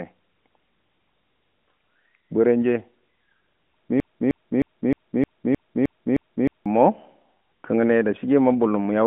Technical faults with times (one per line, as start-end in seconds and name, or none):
4.00-6.66 broken-record loop